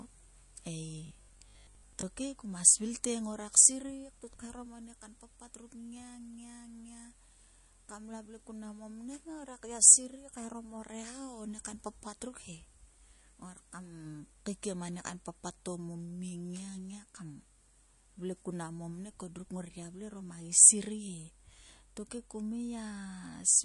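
From start to finish the speech carries MP3 compression damage, plainly audible. Everything above 11.3 kHz is gone, and the thin, watery swirl on sibilants fits a low bitrate around 48 kbps, likely from an encoder starved of bits. On a spectrogram this appears as a hard horizontal ceiling at 11.3 kHz, with patchy, flickering gaps in the upper bands where weak frequency lines drop in and out between frames.

From 1.07 to 2.03 s, just before "kuma svil te ngorak", the speech collapses into robotic sound from repeated short buffers. Audio arrived too slowly, so for most of that second the same fragment was looped instead of new material. The repetition imposes a rigid 50 Hz buzz, which fits a 20 ms buffer, likely a playback underrun. A spectrogram shows evenly spaced 50 Hz harmonic stripes, and the waveform shows identical short cycles repeating.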